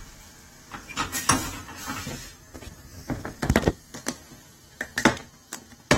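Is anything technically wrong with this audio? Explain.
Yes. Throughout the clip there is plainly audible AAC compression damage, likely from AAC-LC at a low bitrate around 32 kbps. Nothing is present above 16.6 kHz, and the quantised spectrum leaves holes that give the sound a dull, smeared, warbling texture.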